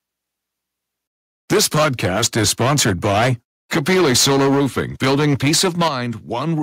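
From 1.51 to 3.32 s and again from 3.72 to 5.88 s, microphone overload clips the peaks, about 11 dB then about 9 dB over full scale. Roughly a sixth, then a fifth, of the samples are flattened, which gives a harsh crackle. The likely cause is input gain set too high.

The microphone volume stepped down at 1.53 s and 4.54 s, by about 2 dB each time, then by about 8 dB at 5.88 s. Each step is a sudden drop in level, likely from the call software automatically cutting the input gain.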